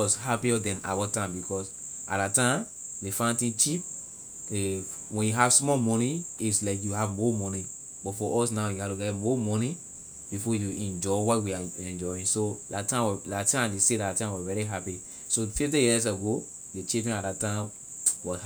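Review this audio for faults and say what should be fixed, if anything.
No technical faults turn up anywhere in the speech. Nothing here needs fixing.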